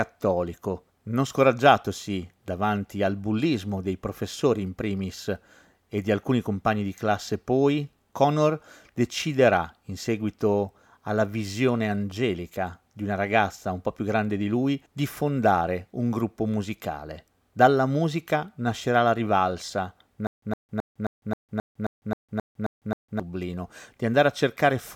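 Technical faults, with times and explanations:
20.27–23.20 s, stutter with silent gaps: playback likely stalled, so a 111 ms speech fragment repeats eleven times, every 266 ms, separated by 155 ms of digital silence.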